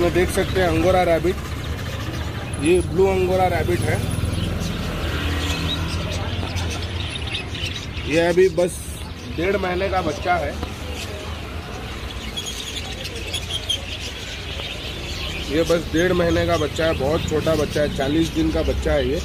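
No technical faults are audible.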